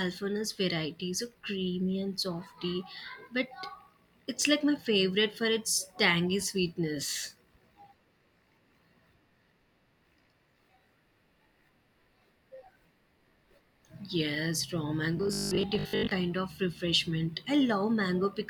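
A speech recording in which, from 15.17 to 16.11 s, the voice collapses into a rigid, metallic buzz pitched at 50 Hz, still loosely tracking the syllables. This is robotic sound from repeated short buffers, likely caused by audio arriving too slowly, so the playback fills the gaps by looping the last 20 ms segment. Roughly half of that stretch is repeated material while the real audio in between is skipped.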